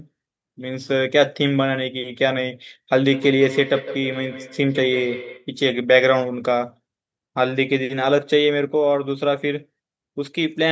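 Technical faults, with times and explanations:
3.13–5.52 s, feedback echo between two devices: sound returns at a steady interval of roughly 150 ms, peaking about 11 dB below the speech, as a second device replays the call into a microphone whose canceller ignores it. Spectrograms show evenly spaced, fainter syllable copies; the waveform shows trailing bursts.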